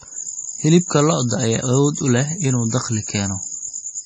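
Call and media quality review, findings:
Watery, swirling speech throughout, sibilants chirpy and metallic, consonant attacks smeared, no content above 9.3 kHz. Likely MP3 compression, heavy damage consistent with a starved bitrate around 32 kbps: treble cut at fixed frequency, weak spectral lines flickering frame to frame.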